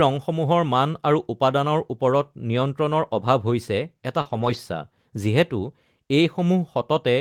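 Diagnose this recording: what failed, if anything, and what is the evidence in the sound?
Short concealed packet loss at the network stage: around 40 ms near 4.21 to 4.27 s never arrived in time. The decoder extended the preceding sound to cover the gap and then crossfaded back, leaving a brief smear in the speech.

Lost packet rebuilt from error correction, also a network loss handled in the codec: from 4.25 to 4.55 s, about 160 ms of audio comes from the low-bitrate redundant copies carried in later packets. There is no gap, but that stretch sounds rougher and noisier.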